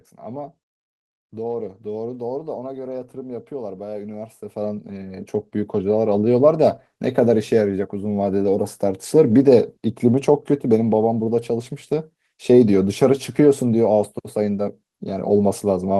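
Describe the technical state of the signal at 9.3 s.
At 9.3 s the speech signal is intact, with no audible technical fault at that moment.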